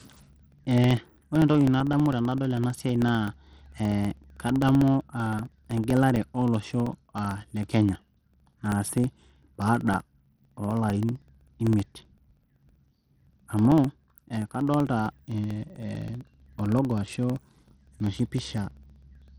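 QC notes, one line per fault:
Throughout, Bluetooth SBC compression, likely: the top end of the speech keeps dropping out and flickering back, and there's a gritty, aliased grain sitting on every syllable. That's what you get when the codec's small bit budget starves the upper sub-bands and quantises the rest coarsely, with no hearing model deciding where the damage lands. It's plainly audible, and the damage fits a low bitrate somewhere around 80 kbps.
0.07 to 19.28 s, periodic USB or driver dropouts: a steady tick every 64 ms, so about 15 or 16 a second, a few hundred over the run. Each one is a sliver of audio, around a millisecond, swapped for silence, and the hard cut in and out of the waveform is what makes the click. Because the gaps are evenly spaced, it sounds like something is blocking the bus or driver on a fixed timer, and the ticks only come through where there's speech to interrupt.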